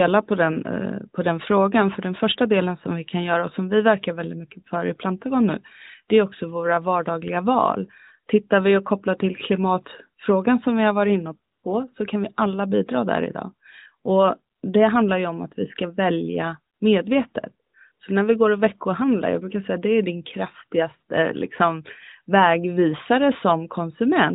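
A speech recording carried over a narrowband mobile link, with light coding typical of AMR-NB that fits its 12.2 kbps mode. It has AMR comfort noise in five short pauses: 11.52–11.64 s, 14.56–14.62 s before "det handlar ju om", 16.74–16.80 s after "att vi ska välja", 17.70–17.74 s after "vi ska välja medvetet", and 17.92–18.00 s. In each, speech frames stop and the real background gives way to smooth synthetic hiss. Unlike a dropout, the gap is filled with noise rather than silence, and it switches in whole 20 ms frames.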